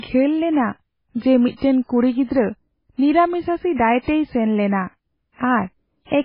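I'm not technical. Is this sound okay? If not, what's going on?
No. MP3 compression damage runs through the whole recording, from start to finish. The speech sounds dull and watery, with nothing above about 5.3 kHz, so the crisp top end is missing. The likely cause is heavy MP3 squeezing: the encoder had too little data to work with, so it cut off the treble and kept dropping faint details, which flicker in and out and leave a swirly haze, with metallic chirps on s sounds.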